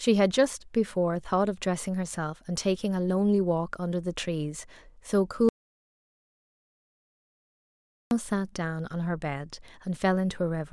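At 5.49 s the speech cuts off abruptly into an audio dropout to silence lasting about 2.6 s, until 8.11 s. The gap is silent with no room tone, likely from the input signal being lost while recording continued. Whatever was said there is gone.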